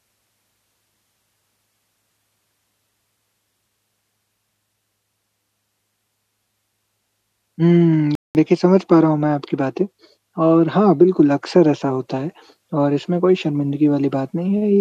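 At 8.15 s the speech drops abruptly into silence, then picks up at 8.35 s exactly where it left off, with nothing missing. This is a rebuffering stall: playback ran out of downloaded audio and paused until more arrived, adding about 0.2 s.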